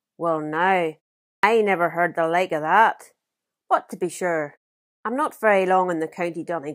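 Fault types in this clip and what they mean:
Clipped start after a pause: at 1.39 to 1.43 s and again at 5.01 to 5.05 s, speech bursts out of silence with its opening sounds missing, about 43 ms lost the first time and 37 ms the second. Each follows a pause of roughly half a second (0.46 s and 0.52 s), long enough for the output device to drop into a sleep state, and the time it needs to wake or relock swallows the onset.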